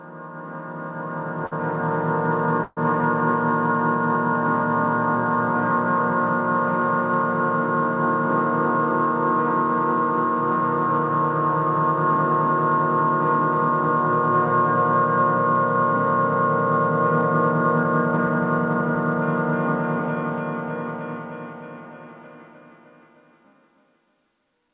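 At 1.46 s, running to 1.54 s, there is a short stall from a late packet. A packet missed its playout time, the jitter buffer ran dry, and the receiver extended the last sound by about 55 ms until the packet turned up, then resumed from the same point. Nothing is lost. The sound is simply held a little too long, with a faint buzzy, slightly dipped quality across the stretch.

From 2.64 s to 2.79 s the audio freezes for about 132 ms, a call audio freeze. The last sound is carried on as a fading buzz and drops to silence for roughly 20 ms before playback picks up exactly where it left off. The likely cause is packets delayed in transit emptying the jitter buffer, so a gap has been inserted into the timeline with nothing missing.

Between 17.84 s and 18.96 s there is a jitter buffer speed-up. With more audio queued than its target, the buffer trimmed short pitch-period-sized pieces repeatedly, taking out about a tenth of a second in total. 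Playback runs at about 110% of normal speed without any pitch change, so the sounds in this stretch come across as hurried.

Throughout the clip, the narrow band with nothing above 4 kHz fits 64 kbps G.711 A-law call coding.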